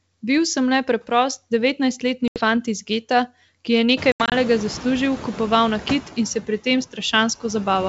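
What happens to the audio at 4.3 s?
Packet loss on an ADPCM call affects the audio from 4.12 to 4.33 s. About 120 ms of signal is missing, spread over 200 ms as silent holes with hard edges. The longest hole is 80 ms, and the pattern fits roughly seven lost packets. Because the lost packets never reach it, the receiving decoder's adaptive predictor and step size fall out of step with the sender's. After each hole the speech returns slightly distorted before it settles.

Noise suppressor artifacts are also present at this point, cutting the noise by about 14 dB. Just before, at around 4.0 s, the room noise rises by about 24 dB and then sits about 15 dB below the speech. The suppressor lowers each band it judges to be steady noise, frame by frame, so the noise dips between words and comes back up underneath them.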